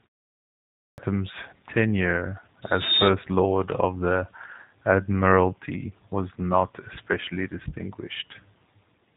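Speech runs through the whole clip with plainly audible G.729 codec damage. Nothing above 3.9 kHz survives, so the sound is narrow and muffled. The voice has a rough, slightly synthetic edge, which fits an 8 kbit/s codec that rebuilds speech from a filter, a pitch predictor and a few pulses per frame. There is also a clipped start after a pause. After 0.79 s of silence, sound resumes abruptly at 0.98 s. About 0.19 s of its opening is missing. The output device had gone idle during the pause and needed time to wake before passing sound again.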